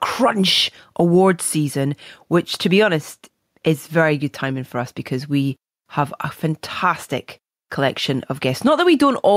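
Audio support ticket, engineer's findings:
Gain pumping throughout the speech. Level swings around 5 dB, dynamics squashed. Likely cause: input gain set far too high, fast limiter/compressor clamping on every peak.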